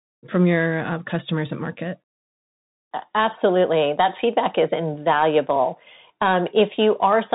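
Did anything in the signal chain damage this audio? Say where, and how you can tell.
Yes. Bluetooth CVSD headset codec damage runs throughout the speech at the codec stage: nothing passes above about 3.8 kHz, s sounds turn scratchy, and granular hiss sits underneath. One-bit up/down delta steps, fitting a 64 kbps link, can't track loud high content, so it distorts.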